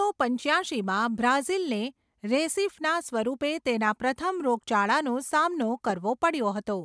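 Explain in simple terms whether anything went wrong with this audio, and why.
Nothing went wrong with this audio, so there is no fault to explain.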